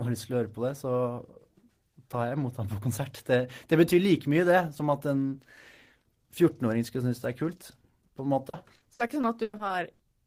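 From 8.49 to 10.01 s, the speech suffers repeated packet loss, with a robotic sound. Short gaps arrive in quick succession, the longest about 100 ms. Each is patched by stretching the last sound. About a quarter of this stretch is filled-in sound, so it turns choppy.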